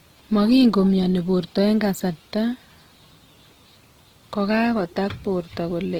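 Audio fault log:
throughout Opus compression: the speech is plainly rough and grainy rather than swirly, with noise-like texture replacing fine detail. The bandwidth stays full up to 20.2 kHz. The likely cause is Opus in CELT mode filling starved bands with folded or noise energy, which fits roughly 16 kbps.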